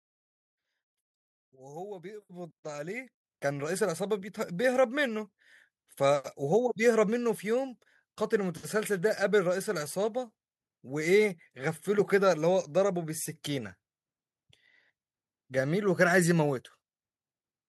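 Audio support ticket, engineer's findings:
Microphone volume stepped up twice, at 2.22 s (about 9 dB) and 3.24 s (about 7 dB). Call software's input gain control jumping the mic level in single steps, voice and background together.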